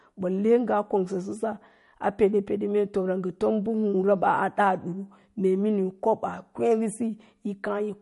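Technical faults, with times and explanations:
Throughout: MP3 compression. The speech has nothing above 11.2 kHz, and the damage is plainly audible: a watery, swirling texture, with s sounds turning metallic and chirpy as weak frequency lines flicker on and off between frames. This is likely a bit-starved MP3 encode, which fits a low bitrate around 48 kbps. A simple low-pass filter would dull the treble just as cleanly, but it would not produce these shifting, warbling artefacts.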